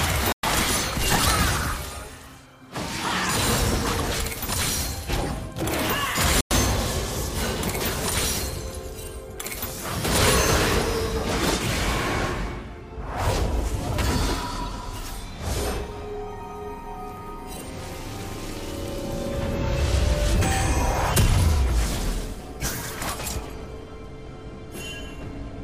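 The sound drops abruptly to silence at 0.32 s for about 0.11 s and again at 6.41 s for about 0.10 s, then resumes, likely a Bluetooth stall from a starved receiver buffer.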